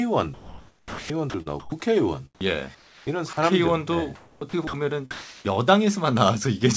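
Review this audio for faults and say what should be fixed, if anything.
Sound chopped by the voice detector, from 0.34 to 1.72 s and from 4.15 to 4.73 s: the speech breaks up, with about 960 ms of the first stretch and 360 ms of the second replaced by flat synthetic hiss. The likely cause is the sender's voice detector switching transmission on and off repeatedly, with the receiver inserting comfort noise in the gaps. Prevent it by lowering the detector's threshold and adding a longer hangover time so it does not toggle mid-phrase.

Sound dropped by the voice detector, at 2.35 to 2.41 s, 3.33 to 3.37 s and 5.11 to 5.45 s: in each spot the speech gives way to steady noise before resuming. About 30 ms, 40 ms and 120 ms of actual speech are lost, with the fill lasting roughly 60 ms, 40 ms and 340 ms. The likely cause is quiet speech or a word ending being classed as background, so the sender stopped transmitting and the receiver played comfort noise until the detector triggered again. 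Prevent it by making the detector more sensitive to low-level speech and extending its hangover past word endings.

Comfort noise in place of the background, from 2.75 to 3.37 s: for about 360 ms the natural room sound is swapped for a smooth, uniform hiss with none of the original texture. This is likely discontinuous transmission during a pause, with the receiver generating noise shaped to the background from occasional updates, in the manner of RFC 3389 comfort noise. The G.722 call path limits everything to below 8 kHz, so the fill sits in the same band. Prevent it by disabling discontinuous transmission or sending more frequent, more detailed background updates.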